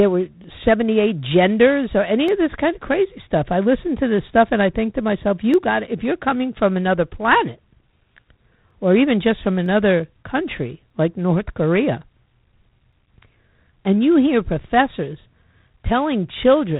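Throughout the speech, G.726 ADPCM at 24 kbit/s adds a harsh, rasping hiss that rises and falls with the speech, unlike steady background noise, and nothing passes above 4 kHz. Single sharp clicks occur at 2.28, 5.54, 8.71, 9.66, 10.90 and 12.93 s, likely dropped samples of about 0.4 ms each. Unlike a dropout, no audible sound goes missing.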